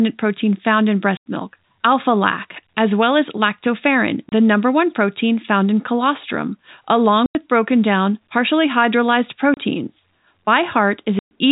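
A speech recording carried over a telephone-band G.711 A-law path is broken by packet loss filled with silence at 1.17 s (after "protein found in"), 4.29 s (after "as well as lactoferrin"), 7.26 s, 9.54 s and 11.19 s. The dropouts last about 90, 30, 90, 30 and 120 ms, all multiples of 30 ms, which fits a 30 ms packet. The receiver inserted silence, so each hole starts and stops abruptly.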